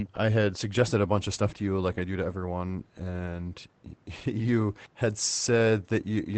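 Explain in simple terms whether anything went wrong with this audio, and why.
Nothing went wrong here: the speech came through a normal internet call connection, which trims off the very highest frequencies above about 8 kHz, and that's simply how such calls are meant to sound.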